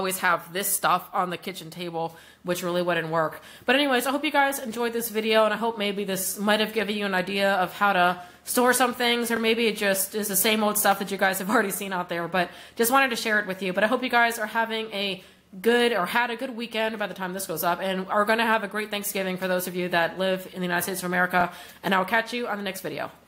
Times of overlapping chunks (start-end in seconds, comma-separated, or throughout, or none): 3.34-3.37, 9.37-9.39, 15.39-15.41, 21.41-21.43